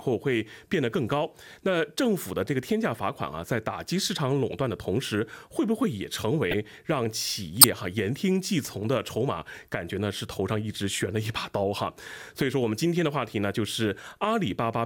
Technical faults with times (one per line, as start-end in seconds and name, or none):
2.46 corrupt frame decoded
6.51-6.54 corrupt frame decoded
7.61-7.64 corrupt frame decoded
8.64-8.69 corrupt frame decoded